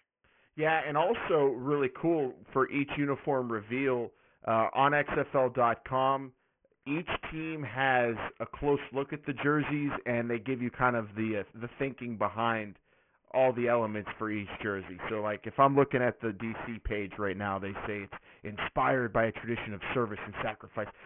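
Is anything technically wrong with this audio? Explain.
Yes. Aliasing runs through the whole clip. The speech was resampled downward without an anti-alias filter, and the spectrum folds at 3 kHz, which points to a drop from 48 kHz to about 6 kHz sampling. Energy above 3 kHz is mirrored back below it as unrelated frequencies, sitting roughly 15 dB under the speech. Sibilants come out gritty and metallic, and the band runs hard up to the 3 kHz edge.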